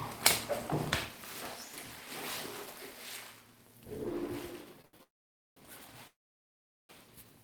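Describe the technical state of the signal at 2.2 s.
At 2.2 s the signal is intact, with no audible technical fault at that moment.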